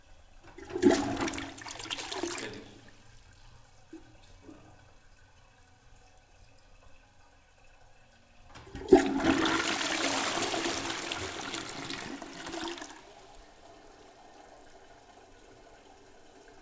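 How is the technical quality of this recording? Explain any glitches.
No glitches to report: the everyday sounds arrive over a call path whose band stops at 8 kHz, which fits a G.722-type wideband codec and is a property of the channel, not a fault.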